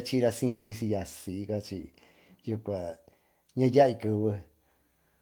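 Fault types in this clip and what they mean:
Long network dropout: from 0.47 to 0.73 s the speech is replaced by a buzzy continuation of the preceding sound lasting about 0.24 s, never falling to silence. Speech then resumes with that stretch missing, likely because packets stopped arriving and the receiver filled the gap.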